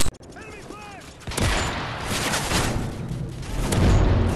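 Nothing stood out on listening to this audio.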